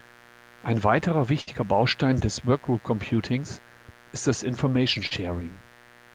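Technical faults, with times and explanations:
Throughout: mains buzz. A steady, raspy buzz sits about 25 dB below the speech, built on 60 Hz and its harmonics. Sharp switching spikes, twice per mains cycle, leaked in from a dimmer, rectifier or unshielded cable, so the harmonics climb well into the kilohertz range.
1.41 to 1.49 s: burst of packet loss. Roughly 60 ms of speech never arrived in time. The receiver stretched the last sound for about 55 ms and faded it, giving a held buzz or fading hiss, then resumed further on with that stretch of speech gone.
5.07 to 5.13 s: short concealed packet loss. About 40 ms failed to reach the decoder, and the receiver patched it with roughly 39 ms of continued sound, pitched or noise-shaped, blended back into the real audio. It comes across as a brief smear or wobble.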